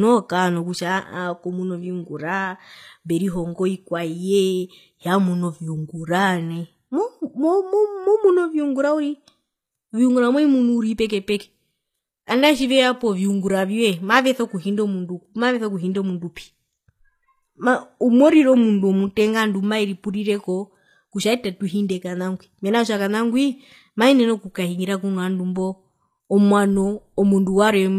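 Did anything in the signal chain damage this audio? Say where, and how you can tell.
Yes, at the codec, throughout. The speech stops at 14.9 kHz and its s sounds are gritty and metallic. That likely comes from HE-AAC compression copying treble up from lower bands, which fits about 24 kbps.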